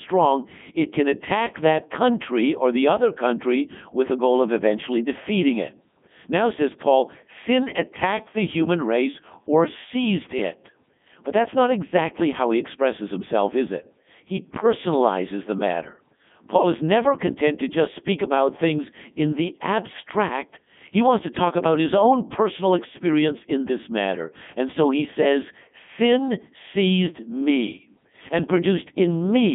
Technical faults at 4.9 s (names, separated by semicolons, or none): Codec 2 vocoder